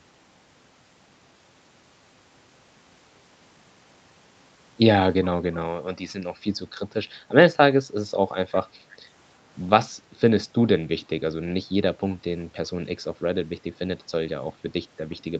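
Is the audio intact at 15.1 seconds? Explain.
No. From 15.11 to 15.15 s there is an echo leak, likely from the far end playing the call over a loudspeaker, where the echo canceller failed to fully remove what its microphone picked up and sent a residue back. The result is a brief, very faint copy of the speech arriving about 0.35 s late, sitting far below the direct sound as a ghostly trace just before the clip ends.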